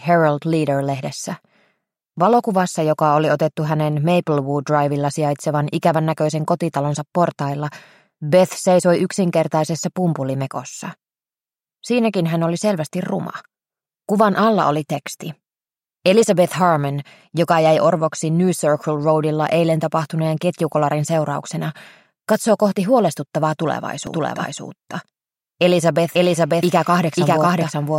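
From about 24.07 s to the end, the audio suffers a doubled audio track: a second full-band copy lands roughly half a second behind at about the same level, with no decay or room colour, and cuts in abruptly. It's likely a second capture path or an edit leaving two copies out of step.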